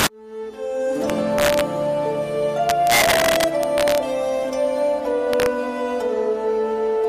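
Integer overflow hits at 0.0–0.07 s (about 8 dB over), 1.10–1.61 s (about 2 dB), 2.69–3.98 s (about 4 dB) and 5.33–5.46 s (about 1 dB): peaks wrap to the opposite sign, giving harsh cracks, seen as sudden sign-flipping vertical jumps in the waveform and broadband vertical streaks on a spectrogram.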